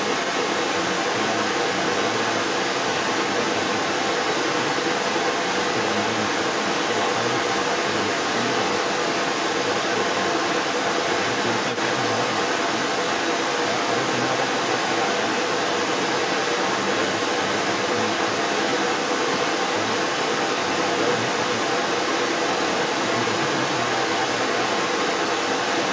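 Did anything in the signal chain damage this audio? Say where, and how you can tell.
Yes. The other side's voice leaking through is present across the whole clip, from 0 to 25.9 s, at roughly 10 dB above the talker. This is likely residual echo that the call processing's echo canceller left behind. Unlike room reverb, it is a separate voice with its own timing, not a smeared tail of the talker.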